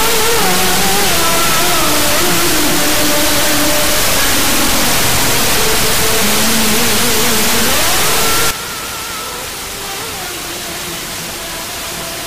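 From the start to 8.51 s the sound carries a harsh, buzzy distortion, and even the quiet stretches are filled with loud noise. It then clears abruptly. A stuck bit is the likely cause: a high-order bit held at a fixed value, so roughly half the samples jump by a step of about -10 dBFS. Unlike clipping, which only breaks up the peaks, this fault also fills the pauses, because the stuck bit shifts with the sign of even tiny values.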